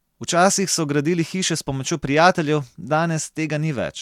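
No technical faults are audible anywhere in the recording.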